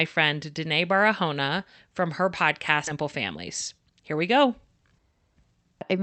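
At 2.87 s there is a skip ahead: roughly a third of a second of speech is simply gone, dropped while later audio was already queued, and playback splices straight across with no gap. On a waveform the envelope jumps abruptly; a spectrogram shows harmonics breaking without silence.

From 2.95 to 5.00 s a jitter buffer speed-up follows, draining the backlog by repeatedly cutting short pieces of one or a few pitch periods, about a fifth of a second in total. Speech runs at 108% with unchanged pitch, sounding hurried; the spectrogram shows compressed syllables but steady harmonic spacing.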